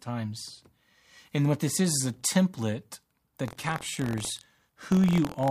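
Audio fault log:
3.46–5.51 s, buffer tearing: a robotic 43.1 Hz rattle on the speech; writer and reader cross each period, splicing in audio about 70 ms old, fitting a 1024-sample buffer.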